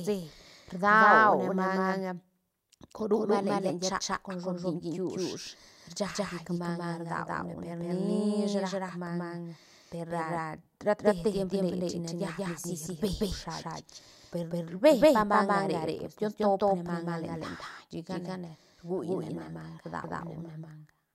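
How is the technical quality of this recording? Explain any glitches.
The recording has one clear fault, a doubled audio track, and it runs from start to finish. A second copy of the speech trails the first by about a fifth of a second, at roughly equal loudness. The copy is full-band and dry, with no decay or room colour, so each syllable lands twice. This is likely a second capture through a slower path, mixed in alongside the original.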